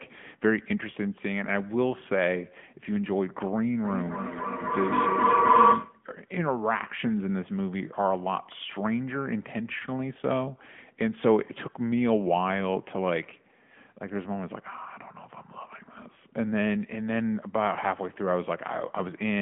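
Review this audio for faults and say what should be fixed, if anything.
AMR narrowband mobile codec, throughout: speech is squeezed into a 150 Hz to 3.4 kHz line band with nothing above 3.6 kHz, and the buzzy, synthetic texture fits roughly 10.2 kbps coding.

Feedback echo between two devices, 3.84 to 6.09 s: one device replays the other's microphone feed, which is picked up again, so repeats arrive about every 300 ms and build to about 7 dB above the speech.

To prevent both, use a wideband codec at a higher bitrate and keep only one device joined to the call in the room, or mute the second device's speaker and microphone.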